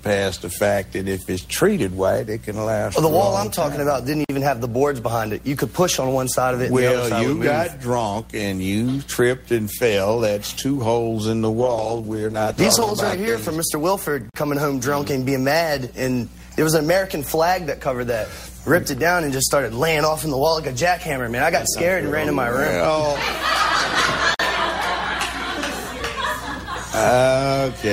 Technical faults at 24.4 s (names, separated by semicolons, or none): gap between chunks